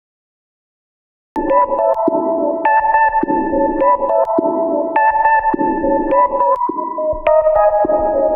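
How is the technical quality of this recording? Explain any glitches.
The recording has one clear technical fault, at the start.

Cut-off start: from 0.00 to 1.36 s the file holds digital silence, and at 1.36 s the sound enters abruptly, mid-event. Capture began late, so the onset was never recorded and there is no natural attack or fade-in.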